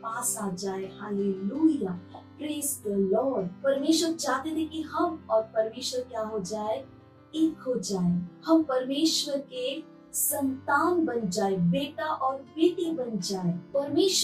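No technical faults are audible anywhere in this audio.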